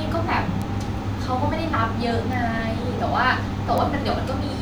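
A single flipped bit in the digital speech data throws one or two samples off by a power of two, producing bit error spikes: sharp, broadband ticks at 0.62 s (about -15 dBFS), 2.33 s (about -21 dBFS) and 3.78 s (about -9 dBFS).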